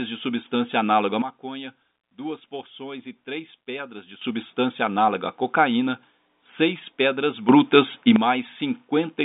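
At 1.22 s the speech and its background noise drop together by about 12 dB, then snap back at 4.21 s. From 7.49 to 8.16 s both jump up by about 9 dB. These are sudden gain jumps, likely a digital gain change applied without a ramp. The telephone band above 3.8 kHz stays empty throughout.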